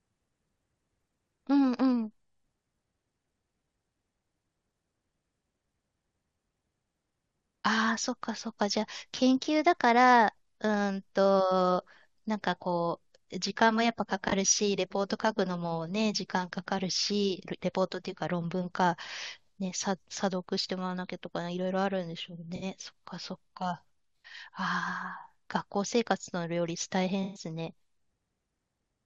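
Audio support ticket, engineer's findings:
AAC frame loss with concealment in decoder path. Missing frames patched from last good spectrum: smeared, phasey patches at 14.28–14.33 s (43 ms) and 22.55–22.63 s (64 ms); longer 27.23–27.43 s gap (128 ms) dips toward silence, fades back.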